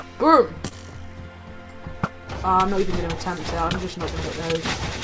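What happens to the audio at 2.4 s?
Nothing goes wrong at 2.4 s: the audio passes through intact there, carried by the WebRTC call path with its codec band limit, with nothing heard above 8 kHz.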